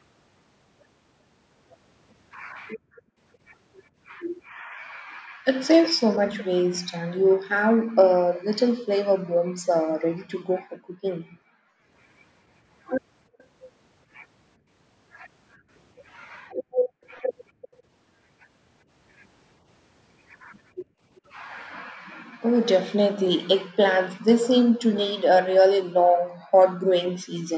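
From 2.76 to 5.4 s the echo canceller clamps the microphone while the far end is playing, and the background is gated: the room tone sinks by up to about 37 dB, for roughly 0.7 s in total, then comes back when the canceller releases. The same background gating by the echo canceller recurs from 8.62 to 11.89 s (up to about 40 dB, about a second in total), from 15.57 to 17.62 s (about 28 dB, under a second) and from 20.84 to 26.54 s (about 40 dB, around 1.5 s). Each time the ambience drops out in patches and breathes back in.

Overlapping the first gate, from 4.44 to 8.4 s, a faint delayed copy of the speech trails the original by 0.36 s, about 20 dB down. This is likely an echo leak, where a loudspeaker's output got past the far side's canceller and was sent back. Brief, fainter scraps of the same echo leak appear at 13.38 to 13.44 s (0.41 s delay, about 35 dB down), 17.11 to 17.68 s (0.39 s, about 25 dB down) and 21.16 to 21.21 s (0.39 s, about 35 dB down).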